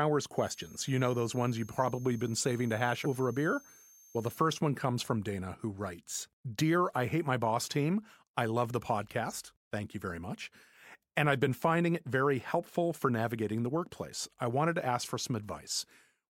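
Switching supply whistle from 0.37 to 4.36 s in this speech clip, ending just before "one comes from": a high tone between 6.3 and 6.42 kHz, about 25 dB below the speech, from a switching power supply running in audible burst mode or beating against another supply.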